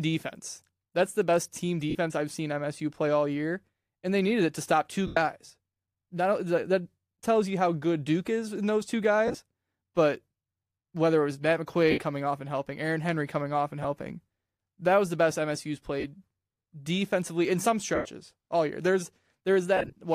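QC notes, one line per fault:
1.90–1.95, 5.07–5.17, 9.27–9.38, 11.91–11.98, 13.83, 16.00–16.05, 17.95–18.05, 19.77–19.95 s, lost LE Audio frames: dropouts of 15 to 135 ms, and those at 9.27 and 19.77 s are scattered bursts with runs of about 20 to 30 ms. The decoder, likely LC3 with gaps fitting 7.5 ms frames, repeats the last spectrum with random phase, so the sound smears into noisy hiss and then fades. On a spectrogram the harmonics blur into noise, and on the waveform the envelope sags.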